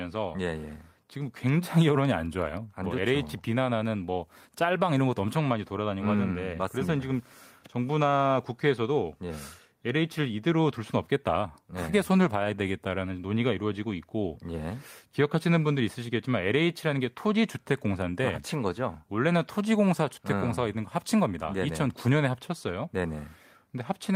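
No technical faults can be heard in this recording.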